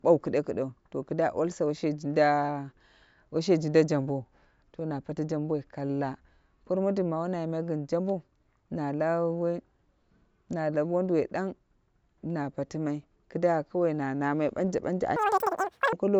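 From 15.16 to 15.93 s, the speech jumps to a wrong sample rate. It plays about 2.76 times too fast, which fits 16 kHz audio sent out at 44.1 kHz unconverted. Pitch rises about 17.6 semitones, so the voice sounds squeaky and rushed.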